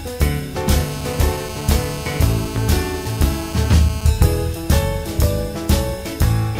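From 0.76 s to 4.09 s a GSM phone buzz runs under the sound: a hard, raspy tone near 217 Hz with many harmonics, sitting about 14 dB below the signal. A nearby 2G handset on a call transmits in bursts at that rate, and the audio circuitry rectifies the radio pulses.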